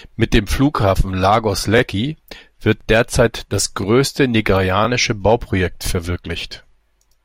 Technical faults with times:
0.77-0.79 overlapping chunks
1.79 overlapping chunks
2.81-2.83 overlapping chunks
3.83-3.85 overlapping chunks
4.85-4.87 overlapping chunks
5.87 overlapping chunks

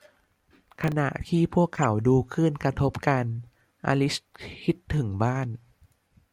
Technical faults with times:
0.00-0.95 buffer tearing
1.76-1.83 corrupt frame decoded

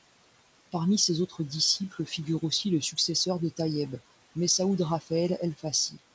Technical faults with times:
0.00-6.15 noise suppressor artifacts
1.29-1.52 speech cut by the noise suppressor
1.79-2.12 speech cut by the noise suppressor
5.01-5.11 speech cut by the noise suppressor

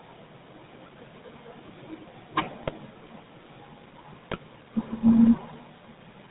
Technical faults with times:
0.00-6.30 GSM full-rate codec
2.61-2.71 GSM bit errors
4.30-4.37 GSM bit errors

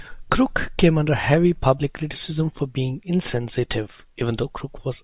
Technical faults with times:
none

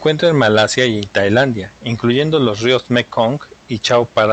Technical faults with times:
none

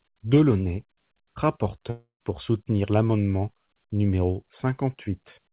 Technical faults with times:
1.90-2.22 long network dropout

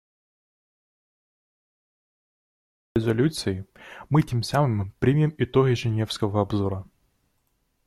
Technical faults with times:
0.00-2.96 audio dropout to silence

